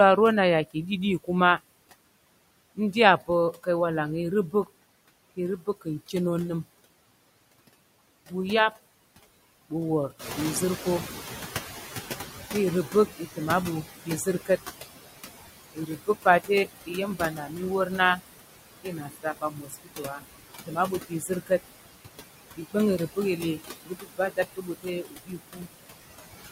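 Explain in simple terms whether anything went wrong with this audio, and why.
Noise suppressor artifacts run through the whole recording: the filter pushes the background down hard, so the noise sinks between the words and rises under them.

Speech cut by the noise suppressor happens from 2.75 to 6.14 s, 12.87 to 14.5 s, 15.72 to 21.61 s and 22.57 to 25.93 s. Quiet sounds and word endings get mistaken for noise and swallowed, worst in the last two stretches.

The noise suppressor catching up starts around 10 s, when the room noise suddenly gets louder. From 10.19 to 13.24 s the extra noise comes through before the filter adjusts and fades it out over about three seconds.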